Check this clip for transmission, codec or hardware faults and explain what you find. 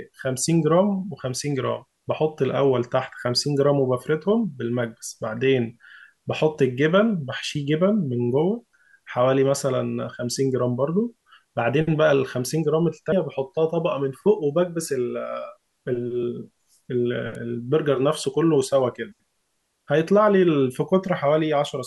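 Yes, there are faults: two dropouts of compressed frames in the decoded stream and one electrical snap.

Compressed frames skipped, at 13.12 s and 16.23 s. At 13.12 s about five frames go missing, roughly 150 ms of speech. At 16.23 s it is about two frames, around 50 ms. The jump matches a frame length of 26.1 ms, which fits an MP3-style 1152-sample frame. Frames were either lost from the file or rejected by the decoder, so playback lands further on. The overlap between adjacent frames smears each join into a short, soft blip. A buffer underrun would leave silence or a hard click instead, and the speech would not jump ahead.

Electrical switching spike, at 17.35 s. This is a sharp snap, about a millisecond long, laid on top of the speech. Nothing is removed and the timing does not shift. It was likely picked up from a nearby switch, motor or static discharge arcing into the audio line. 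That is what separates it from the frame skips: here the sound stays continuous and something is added to it, whereas the skips take audio out and smear the join.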